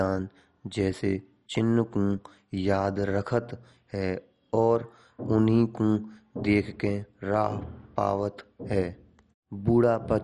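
Throughout, the speech is dull, with nothing above 11.3 kHz and a gurgling, granular texture, likely from MP2 compression at a low rate near 48 kbps. Unlike a plain low-pass, upper sub-bands flicker on and off.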